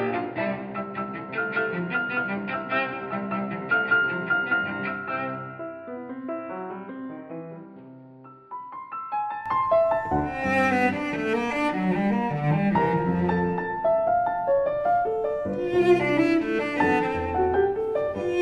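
From the start to 9.46 s the audio is dull, with nothing above 5 kHz, about 10 dB quieter and carrying its own low noise floor; at 9.46 s it opens up with no gap. This likely reflects the input switched to a poorer device. The simultaneous shift in level and background noise sets it apart from a plain filter or codec bandwidth drop.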